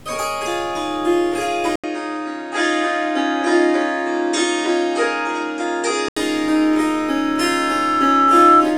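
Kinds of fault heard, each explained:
Input switched to a poorer device: From 1.76 s to 6.17 s the sound loses everything above 9.1 kHz and turns duller, with a short 80 ms gap at the changeover. The overall level stays about the same, and a faint new noise floor sits far below the signal. This points to the recording likely having moved to a different, narrower-band input device partway through, whose own bandwidth and noise replace those of the original path.
Loudspeaker feedback squeal: From 6.55 s to 8.68 s a single 1.3 kHz tone grows steadily over roughly two seconds until it stands well above the rest of the sound. The microphone is picking up the loudspeaker it drives, and at 1.3 kHz the round-trip gain exceeds unity, so each pass through the loop reinforces that frequency until it becomes a sustained squeal.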